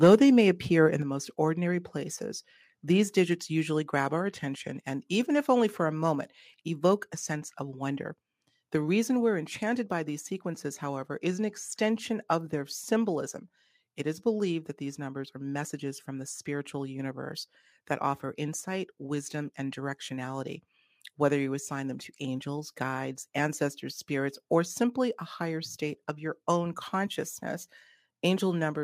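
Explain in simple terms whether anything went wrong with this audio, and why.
Within the first moments, from 0.03 to 0.15 s, the loudest part of the speech sounds harsh and crackly. That is microphone overload: the tops of the waveform are being chopped off because the sound hit the limit of the converter, likely from the input level being set too high.

At 1.02 s and again at 6.15 s, the voice and the background both suddenly get quieter in a single step, the first drop larger than the second. That is the microphone volume being stepped down, likely the call software turning the input level down after finding the microphone too loud.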